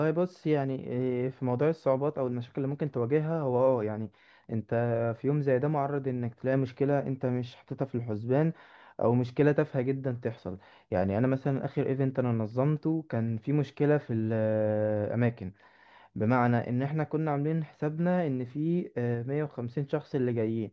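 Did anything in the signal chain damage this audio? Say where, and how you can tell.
No, no signal-chain damage heard.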